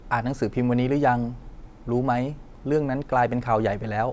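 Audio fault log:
No technical faults are audible; the speech signal stays continuous and steady in level across the whole clip.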